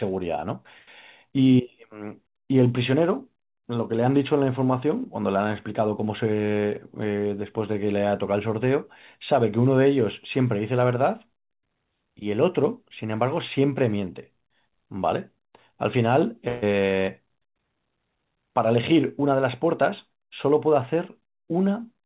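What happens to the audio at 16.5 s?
A burst of packet loss hits from 16.48 to 16.64 s. A short run of the call's audio never arrived in time. The receiver covered about 140 ms by stretching the last received sound and letting it fade. That gives a brief held, decaying smear instead of new sound. When the stream resumes, roughly 140 ms of the original has been skipped. Through the gap, the narrowband call sound stays capped at 4 kHz.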